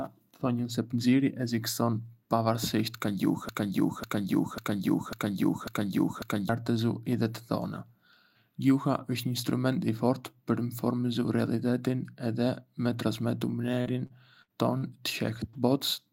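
From 3.49 s to 6.49 s, right after "pënxieri ekziston pavarësisht ka", a broken-record loop takes over: a 0.55 s fragment plays five times back to back, likely because the player or stream stalled and kept resending its last fragment. The audio due in those three seconds is lost. A spectrogram shows identical blocks tiled side by side, and the waveform repeats exactly.

Between 13.81 s and 14.84 s, repeated packet loss produces a choppy stretch. Four separate gaps, the longest 60 ms, were patched by extending the preceding sound, which adds up to about 17 percent of the span. On a spectrogram, harmonics flatten into smeared horizontal bands between abrupt breaks.

At 15.50 to 15.57 s, a short concealed packet loss leaves a 40 ms hole, filled by continuing the last sound and then blending back. It is heard as a brief smear or wobble. The spectrogram shows a short, blurred patch where detail stalls and the waveform briefly becomes too regular.

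Inside that patch, from 15.53 s to 15.55 s, 20 ms was instead restored from error correction, a low-bitrate copy carried in the next packet. There is no gap, but that frame sounds rougher and noisier, and the spectrogram shows a slightly grainier, less defined slice.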